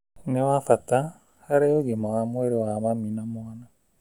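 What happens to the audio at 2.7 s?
Nothing goes wrong at 2.7 s; the speech carries on intact through that moment.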